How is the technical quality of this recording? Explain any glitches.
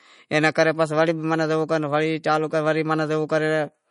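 Quality's let down by what sounds like heavy MP3 compression throughout the speech. Nothing gets past about 10.6 kHz, and the watery, swirly smear on sibilants and consonant attacks comes from weak frequency lines flickering between frames. That's likely a starved encoder, consistent with a bitrate around 40 kbps.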